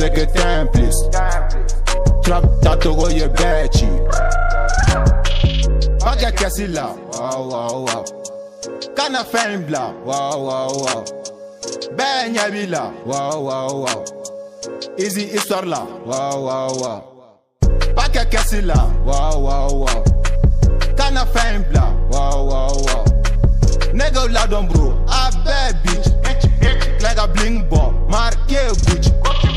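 Nothing here sounds like a technical fault; the audio runs along without any glitch, dropout or break worth pointing to.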